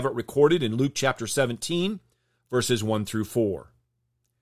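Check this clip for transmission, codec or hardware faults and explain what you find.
No transmission, codec or hardware faults can be heard anywhere in this speech recording.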